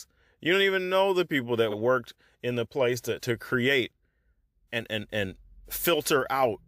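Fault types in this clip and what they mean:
Repeated frames: at 1.70 s the speech stutters briefly, as a single block of about 46 ms, running from 1.70 to 1.74 s, is played a second time straight after itself. A stretch of compressed data reached the decoder twice, so the same fraction of a second sounds again. The clip runs about 46 ms longer than it should.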